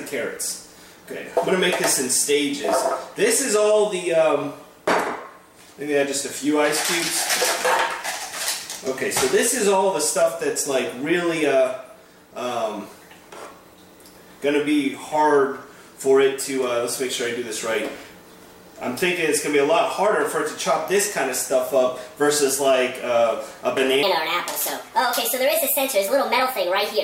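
From 24.03 s to the end at 27.03 s comes a section at the wrong speed: the audio runs about 1.41 times too fast, likely from playback against a mismatched clock, so pitch jumps up roughly seven semitones and everything sounds hurried. On a spectrogram, harmonics shift upward and events crowd closer together.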